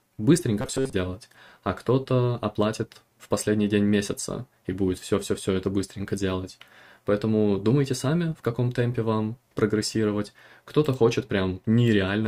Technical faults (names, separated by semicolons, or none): robotic sound from repeated short buffers